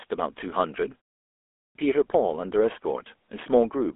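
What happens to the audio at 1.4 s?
A clipped start after a pause: after about 0.36 s of silence, the waking output swallows 1.29–1.75 s, so the sound begins abruptly, missing its onset, unlike a muted pause that returns in time. Throughout, including here, the GSM full-rate codec adds buzzy, gravelly roughness and passes nothing above about 3.7 kHz, consistent with a 13 kbps telephone path.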